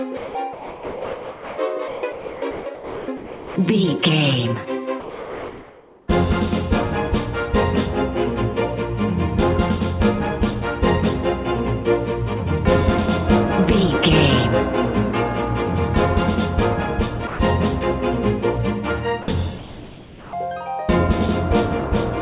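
A voice detector at the sending end, likely misjudging the sound as background, switched transmission on and off repeatedly from 0.17 to 1.58 s and again from 1.88 to 3.56 s. About 1.2 and 1.3 s of each stretch became comfort noise, so the audio sounds choppy. The same detector likely stopped sending entirely at 5.0 to 6.08 s, 17.27 to 17.39 s and 19.22 to 19.28 s, so these are cases of sound dropped by the voice detector. In the first gap about 0.45 s of sound is lost, and the two later gaps are brief holes of 0.12 and 0.06 s. From 19.58 to 20.33 s, likely discontinuous transmission during a pause, comfort noise replaces the background, which sits about 19 dB below the loud parts. The real ambience gives way to a flat, featureless hiss about 3 dB quieter. The call path's narrowband sound, with nothing above 4 kHz, fits G.711 A-law at 64 kbps.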